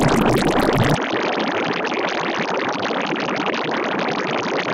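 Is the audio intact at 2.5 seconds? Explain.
No. From 0.95 s to the end, the input likely switched to a poorer device. Nothing passes above 6.6 kHz, so the sound is duller. It drops by about 5 dB, with a faint new noise floor. There is no gap at the switch.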